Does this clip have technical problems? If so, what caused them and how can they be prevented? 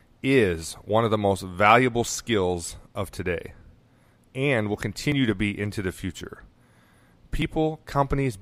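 Yes. At 5.12 s and 7.42 s the speech jumps abruptly ahead, losing around 10 ms and then around 40 ms, which is likely a dropped buffer (overrun). The program failed to collect samples before the hardware overwrote them, so the two sides join with no gap. A waveform shows a sudden break in the wave's shape at each splice, and a spectrogram shows the pattern shifting abruptly. To prevent it, use larger buffers and give the capture thread higher priority so it always reads in time.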